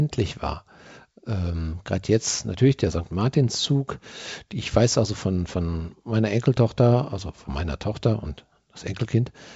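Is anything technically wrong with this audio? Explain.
No, nothing is technically wrong: this is speech carried over G.722 wideband telephone coding at 64 kbit/s, with the expected band limit leaving nothing above about 7.7 kHz.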